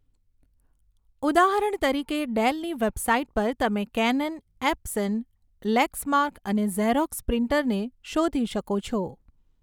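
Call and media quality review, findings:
Nothing stood out on listening to this speech recording.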